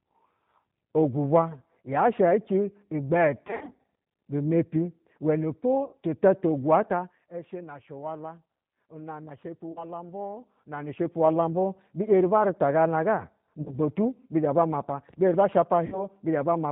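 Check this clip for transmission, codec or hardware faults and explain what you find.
There are two faults: the G.729 codec colours the whole clip, and packet loss concealed by the speech codec breaks in at five points.

G.729 codec, throughout: the speech is rebuilt at 8 kbit/s from a vocal-tract filter, a pitch predictor and a few pulses per frame. Nothing above 4 kHz survives, and the voice sounds plainly rough and synthetic. This buzzy, pulse-built coarseness differs from the swirly, smeared artefacts of transform codecs.

VoIP packet loss concealed by the speech codec, at 3.47–3.79 s, 5.85–5.95 s, 9.72–9.85 s, 13.62–13.77 s and 15.86–16.09 s: the decoder extends its last pitch and filter with falling gain when packets go missing. The sound stretches into a fading buzzy tone and stays weak briefly after packets return. In the first event, about 180 ms of loss is scattered over 320 ms. 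A plain dropout would leave silence instead of this filled, decaying tone.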